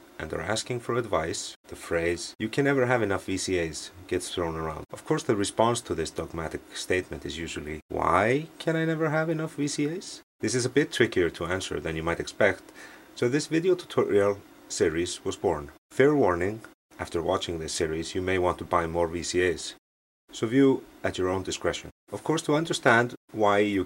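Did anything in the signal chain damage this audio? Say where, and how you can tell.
No, nothing along the chain seems to have left a mark on this one, so there's no stage to point a finger at.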